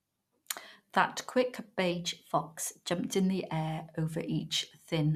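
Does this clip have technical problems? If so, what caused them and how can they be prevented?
Yes. A drift correction step runs from 1.92 to 2.92 s. The speech suddenly plays about 6% fast and rises by roughly a semitone (101 cents), then snaps back. The likely cause is clock-matching software jumping its playback rate to rebalance a buffer. Using gradual, inaudible resampling adjustments instead of a single step prevents it.

DAB burbling occurs from 2.07 to 2.15 s. Weak reception let bit errors, at a rate of a small fraction of a percent, slip past error correction into the MP2 data. Wrong samples put short blips of noise into individual sub-bands across a few corrupted frames. A better antenna or stronger signal prevents it.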